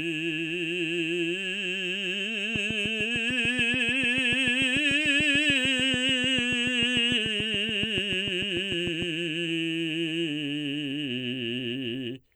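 From 2.56 to 9.03 s, a steady ticking of about fifty clicks at 6.8 per second sits well above the music, a train of clicks likely from nearby interference.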